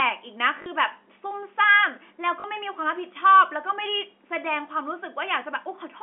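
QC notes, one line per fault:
0.62–0.66 s and 2.40–2.44 s, packet loss with last packet repeated: each 40 ms gap is a brief robotic stutter with a short buzz. The receiver replayed the last packet to fill the gap. The repetition buzzes at about 50 Hz, which points to two lost 20 ms packets each time. It sits inside G.711 telephone audio limited to 250 Hz–3.4 kHz.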